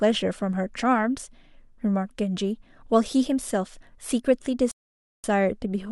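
The player ran out of downloaded audio near the end of this speech clip, producing a rebuffering stall from 4.71 s to 5.24 s. With nothing left to play, output stops and the speech drops to silence for about 0.53 s, then picks up exactly where it left off once more data arrives. No speech is lost or skipped; the pause simply inserts roughly half a second of dead air into the delivery.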